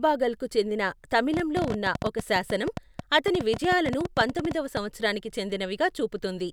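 From 1.34 to 4.78 s the speech carries a train of clicks, about 11.4 per second at uneven spacing, some forty in all, peaking roughly 10 dB above the speech and ticking through pauses too, likely from interference or a faulty connection. Waveform spikes and thin vertical spectrogram lines mark each one.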